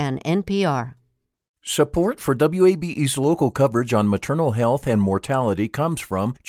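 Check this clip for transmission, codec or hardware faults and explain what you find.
No faults detected.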